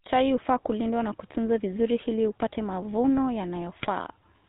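GSM full-rate codec coloring runs through the whole speech clip: nothing above 4 kHz survives, and the voice has a buzzy, gravelly edge from a vocal-tract model driven by a sparse, regularly spaced pulse train, which fits the 13 kbps full-rate coder. GSM bit errors hit from 3.79 to 3.87 s, just after "vizuri hili upate mavuno". Corrupted filter, pitch and gain values reach the decoder across what sounds like about three frames, bending the spectrum and level into a brief squawking, gargling burst.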